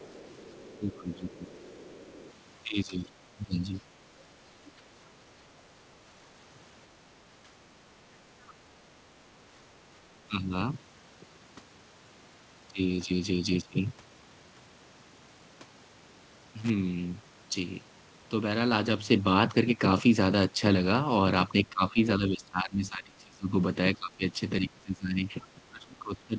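From 0.00 to 2.33 s the echo canceller likely failed to fully remove the far-end loudspeaker signal from the microphone, so the other side's voice leaks through at about 25 dB below the speech, a faint second voice under the talker. Within that stretch, from 0.78 to 1.31 s, speech is suppressed in double talk: with both sides active, the canceller likely could not tell its own talker from the echo and attenuated everything, so the voice dips by up to about 15 dB. A deeper dip of about 20 dB follows from 2.66 to 3.55 s. Short echo scraps, about 30 dB down and roughly 60 to 70 ms long, leak through again at 4.65 and 8.47 s. At 10.29 to 10.52 s a brief, shallow ducking of about 5 dB lasts around a tenth of a second. At 16.59 to 16.70 s a loose connector briefly makes and breaks contact, chopping the line into a short, irregular burst of crackle. From 21.65 s to the end the double-talk suppression returns, pulling the talker down by up to about 20 dB. 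Throughout, nothing is heard above 8 kHz, which fits a wideband call codec such as G.722.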